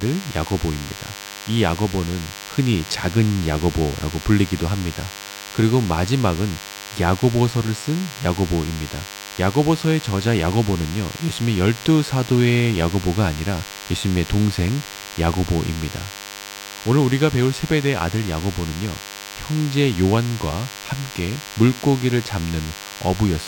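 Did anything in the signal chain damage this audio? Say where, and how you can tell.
Yes: a thin, steady 100 Hz buzz rich in harmonics, well below the speech, runs throughout. This is DECT cordless phone buzz: nearby 10 ms radio bursts rectified in the analogue wiring.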